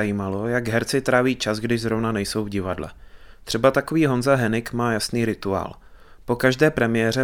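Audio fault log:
Nothing to log here, as the speech comes across without a single technical fault anywhere in it.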